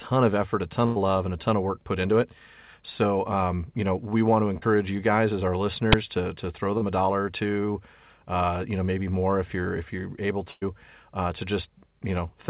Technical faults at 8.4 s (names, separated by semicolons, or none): none